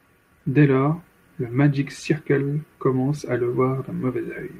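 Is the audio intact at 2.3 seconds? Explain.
Yes, the speech at 2.3 seconds is intact, with no fault audible at that moment.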